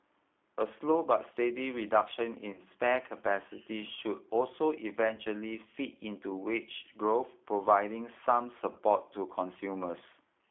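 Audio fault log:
Throughout: G.729 codec. A low-rate speech coder, sounding like 8 kbit/s, rebuilds the speech from a filter and sparse pulses, giving a rough, synthetic voice band-limited to 300 Hz to 3.5 kHz.
2.53–2.60 s, 5.15–5.22 s, 8.73–8.78 s: VoIP packet loss concealed by the speech codec. Each gap fits one lost 30 ms packet. The decoder extrapolated the last frames, smearing the speech into a fading buzz that recovers only gradually afterwards.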